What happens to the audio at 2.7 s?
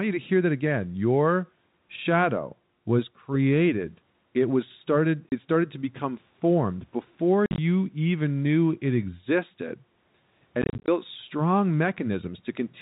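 Nothing goes wrong at 2.7 s: the audio carries straight through that moment with no fault, only the narrow, telephone-band sound of G.711 coding that runs through the whole clip.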